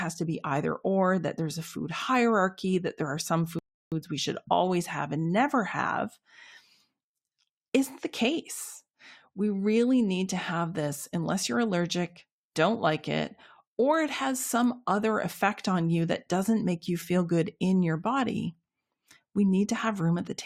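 At 3.59 s, right after "that there are some", the speech drops abruptly into silence for about 0.33 s, then picks up cleanly at "we should always have" with nothing skipped. This is a rebuffering stall: the player used up its downloaded audio and simply waited for more data before carrying on. No material is lost. The gap adds roughly 330 ms to the timeline, heard as an unnatural pause mid-phrase.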